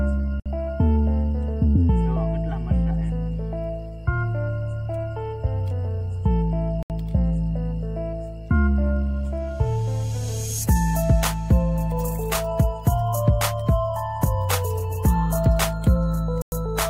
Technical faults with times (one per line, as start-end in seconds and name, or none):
0.40-0.46 Bluetooth stall
6.83-6.90 Bluetooth stall
16.42-16.52 Bluetooth stall